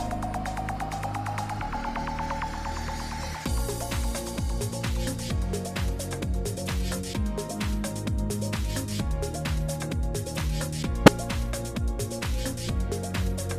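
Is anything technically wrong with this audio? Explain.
Yes. There is a corrupt frame decoded from 11.06 to 11.08 s. Flipped bits in one compressed frame made the decoder misread gains or codes and put energy at the wrong frequencies for that frame's length. It is a short, loud glitch, peaking around -5 dBFS.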